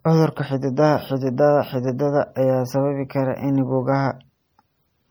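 Across the whole clip, the speech carries plainly audible codec damage, likely from MP3 compression running short of bits, with the grain fitting a low bitrate around 48 kbps. Starved of bits, the encoder zeroes weaker frequency lines, which drop in and out from one frame to the next. The result is a watery, swirling texture on the speech, metallic chirping on s sounds, and consonant onsets that smear instead of landing cleanly.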